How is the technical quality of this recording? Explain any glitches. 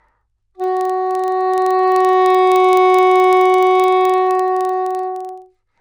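The recording has one persistent glitch. From start to finish, a regular ticking runs under the sound at about 23.4 per second. It is a low buzz that grows and fades with the level of the audio. This is a filter restarted on every block: the filter discards its memory at each block boundary and begins from silence. That causes a small transient at every boundary, and the rate fits a 2048-sample block.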